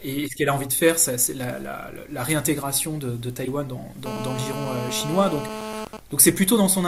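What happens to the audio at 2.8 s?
Nothing goes wrong at 2.8 s; the speech there plays through intact, with no dropout, click or distortion.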